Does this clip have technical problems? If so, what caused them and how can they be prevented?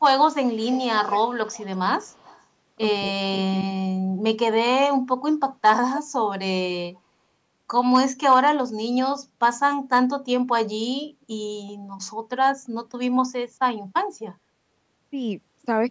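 Yes. Hard clipping occurs at 0.05 to 0.24 s, 5.66 to 5.71 s and 7.79 to 8.49 s. The signal overdrives a stage by about 3 dB, so the peaks are sliced flat, and the squared-off tops add high harmonics that sound like a gritty crackle on the loudest moments. Unlike codec distortion, it tracks level: it appears only when the sound peaks and vanishes when the sound drops. Setting the input gain lower, with a few decibels of headroom, prevents it.

Echo leak appears from 0.52 to 1.79 s, from 2.03 to 2.45 s, and briefly from 6.95 to 7.00 s. It sounds like a delayed copy of the far side's audio, trailing it by 236 ms. The copy is roughly 15 dB down in the first stretch, much fainter in the second, and barely there at 7 s. The likely cause is a loudspeaker on one end whose echo canceller let some of its microphone pickup through. Room reverberation would smear the sound continuously, whereas this is a distinct repeat at a fixed lag. 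Using a headset, or lowering the loudspeaker volume, prevents it.

Speech suppressed in double talk occurs between 3.11 and 3.19 s, affecting about 70 ms in total. The audio dips sharply, by roughly 20 dB at its deepest, while both sides talk at once. This is likely the echo canceller failing to tell the local talker from the loudspeaker echo and ducking everything. A network dropout would cut out regardless of who is talking, whereas this happens only during overlap. A headset, or a canceller with better full-duplex handling, prevents it.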